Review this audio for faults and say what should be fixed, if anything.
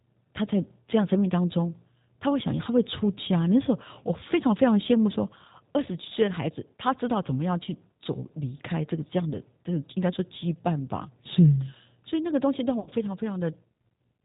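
The G.729 codec is audible throughout the speech: an 8 kbit/s model rebuilds each 10 ms frame from a filter, pitch predictor and a few pulses, giving a rough, synthetic edge. On a spectrogram nothing appears above 4 kHz. Prevent it with a wideband codec such as Opus.

VoIP packet loss concealed by the speech codec occurs from 12.80 to 12.90 s. About 60 ms went missing, consistent with two lost packets, and the decoder stretched its last pitch and filter into a fading buzzy tone or coloured noise that stays weak briefly after packets resume. The waveform shows a decaying, overly regular stretch, and the spectrogram shows smeared harmonics. Prevent it with a jitter buffer, forward error correction or a more reliable network path.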